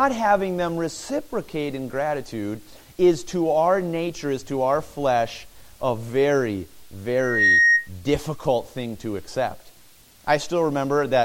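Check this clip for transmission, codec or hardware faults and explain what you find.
One fault: loudspeaker feedback squeal from 7.15 to 7.89 s. A microphone re-amplifies its own loudspeaker, and at 1.9 kHz the loop gain tops one, so that tone swells over roughly a third of a second to about 10 dB above the sound. Unlike steady interference whine, it grows from nothing and then stops.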